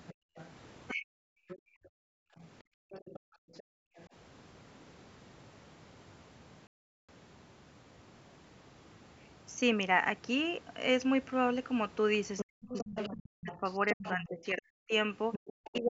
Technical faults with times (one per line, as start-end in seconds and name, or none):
0.08-4.05 other side's voice leaking through
0.14-0.36 background gated by the echo canceller
0.92-1.35 speech suppressed in double talk
1.63-3.97 background gated by the echo canceller
6.67-7.09 playback stall
12.37-15.98 other side's voice leaking through
12.44-15.98 speech suppressed in double talk